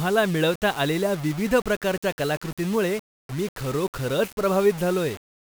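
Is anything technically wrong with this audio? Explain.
Yes. Throughout the speech there is grainy, gritty distortion that tracks the signal, likely low bit depth without dither: samples rounded to about 5 bits, leaving error roughly 20 dB below the speech. Unlike steady hiss, it changes with each sound, and quiet passages sputter or drop out.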